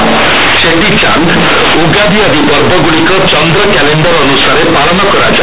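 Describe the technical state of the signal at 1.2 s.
At 1.2 s the speech suffers from companded audio read as linear, present throughout. A-law bytes play as raw 8-bit samples, so quiet passages swell into loud, buzzy, noisy distortion.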